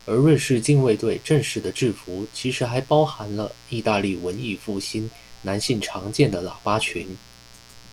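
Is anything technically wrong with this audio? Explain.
Yes. Mains buzz runs throughout the speech, about 25 dB down: 60 Hz switching spikes add raspy harmonics into kilohertz range, unlike smooth, low-only hum.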